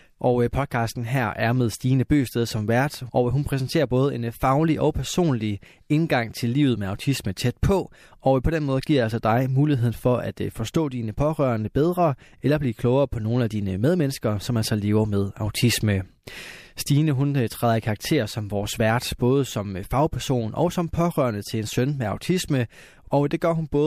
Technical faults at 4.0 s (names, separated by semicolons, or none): sample clock jitter